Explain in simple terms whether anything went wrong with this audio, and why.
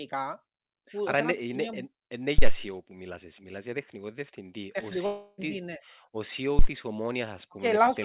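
Two deep thumps land at 2.38 s, just after "είναι σημείο είναι είναι", and at 6.59 s. These are phantom power thumps: a microphone supply switched on or off on a live input, sending a sudden jolt that fades within a split second.

At 5.06 to 5.40 s the sound turns into a fading buzz or hiss and about a third of a second is lost, likely a long network dropout on this phone-style call line.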